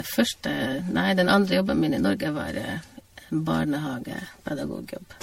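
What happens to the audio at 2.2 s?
At 2.2 s you're hearing generation loss, which runs through the whole clip: swirly, smeared and hollow speech with blurred attacks and nothing above 16.5 kHz. It's likely the result of about seven rounds of MP3 re-encoding at something like 64 kbit/s, each pass stacking fresh quantisation damage.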